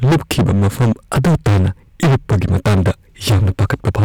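Hard clipping runs through the whole speech clip. It's pushed about 20 dB past what the stage can pass, so close to a third of the waveform gets sheared flat. Those squared-off peaks throw up high harmonics, so every loud syllable turns into harsh fuzz.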